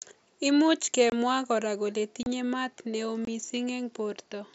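At 1.10 to 1.12 s, 2.23 to 2.26 s and 3.25 to 3.28 s, unconcealed Bluetooth headset packet loss cuts the mSBC wideband speech with hard gaps of about 23, 30 and 23 ms. Lost headset packets were never filled in, so the gaps have abrupt edges rather than the smeared repeats that concealment would leave.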